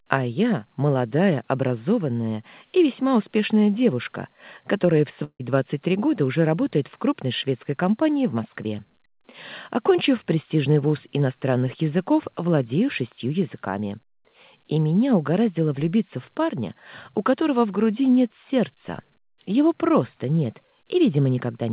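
At 5.24 s the sound breaks off. A fading buzz or hiss continues the last sound for about 150 ms, then briefly goes quiet, and the audio resumes at 5.41 s with a section missing. This is likely a long network dropout, heard through the 4 kHz-limited G.711 call path.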